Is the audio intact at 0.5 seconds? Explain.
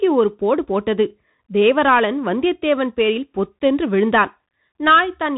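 No. At 0.5 s the speech is coloured by the Bluetooth CVSD headset codec, present for the whole clip: each sample is reduced to a single up-or-down bit, which fits a 64 kbps link, so steep transients outrun the adapting step. The result is a gritty hiss, scratchy s sounds and distorted peaks, while a spectrogram shows a hard ceiling with nothing above 3.8 kHz.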